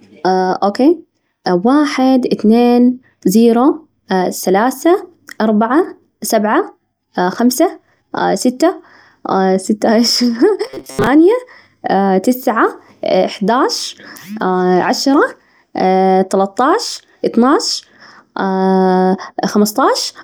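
From 10.67 to 11.08 s the speech goes robotic, a stiff metallic 133 Hz buzz, likely from repeated short buffers of about 7.5 ms replacing most of the audio.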